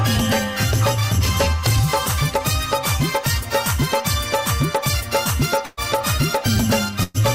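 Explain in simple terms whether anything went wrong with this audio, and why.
Burst of packet loss at 5.65–5.80 s and 7.03–7.23 s: chunks of audio were lost or arrived too late, so the last sound was stretched and faded, skipping about 120 ms each time.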